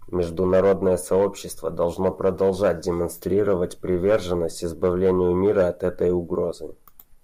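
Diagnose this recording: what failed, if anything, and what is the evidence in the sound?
Nothing failed, and the sound gives no evidence of a fault at any stage of this recording.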